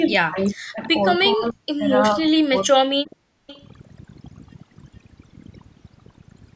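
A short piece of speech, and the whole thing has been through overdone noise removal. The suppressor was clearly pushed too hard, so any frequency band sitting close to what it took for noise gets pulled way down or gated off, and the softer edges of the speech go with it. The background sits at near silence with little twinkling specks in it. On top of that, the level collapses in three stretches: 0.0 to 0.81 s, 1.34 to 1.9 s, and 2.15 to 3.22 s, dropping by as much as about 40 dB at the worst points. That's most likely speech suppressed in double talk. The far end seems to have been talking at the same moment, the echo canceller couldn't tell the near talker from the loudspeaker echo, and it ducked everything, so the speech dips and breaks up in pieces for roughly 0.7, 0.5 and 1 s in total across those three spans. Then from 3.47 to 3.65 s there's a faint repeat trailing the speech by 434 ms, sitting around 25 dB under the main signal. 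That's likely an echo leak: someone on a speakerphone, their canceller not catching everything the mic picked up, and the leftover getting sent back down the line as a delayed copy. The top end stops at 8 kHz, which is just the call's own mic chain doing its normal band-limiting.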